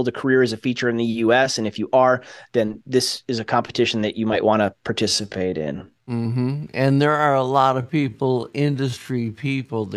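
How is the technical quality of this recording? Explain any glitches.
The recording is clean until about halfway through, where a time-stretched section takes over. From 5.04 s to the end at 9.96 s, right after "you might want to", the pace suddenly drops to about 0.6 times normal speed, yet the pitch stays put. The likely cause is software lengthening the audio by repeating short slices to fill time. That repetition makes the slowed speech drag, with each syllable drawn out, before "go to these".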